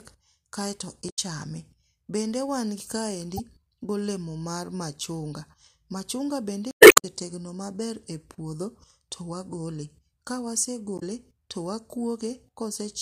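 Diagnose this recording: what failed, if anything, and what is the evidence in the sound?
The failure is at the codec stage, from damaged data in the compressed stream. Brief glitches land at 1.06–1.19 s, 3.36–3.40 s, 6.68–7.05 s and 10.95–11.03 s, where the decoder misreads corrupted frames and hunts for the next header. The third one adds about 34 ms.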